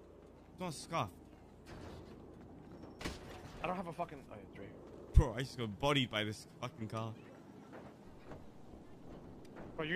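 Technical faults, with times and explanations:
No technical faults can be heard anywhere in this audio.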